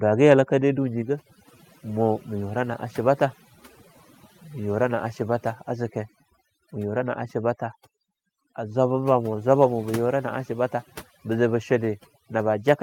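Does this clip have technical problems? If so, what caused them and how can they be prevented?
Yes: overdone noise removal runs throughout, leaving near-silent gaps flecked with twinkling specks as individual bands are pushed far down near the noise estimate. A spectrogram shows isolated blips on an empty floor. Use gentler reduction strength.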